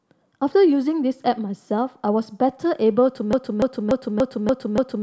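At 3.33 s the speech locks into a broken-record loop: a 290 ms fragment repeats exactly, back to back, six times until the end at 5.03 s. The likely cause is a stalled player or stream resending its last buffered piece, so the intended audio is lost.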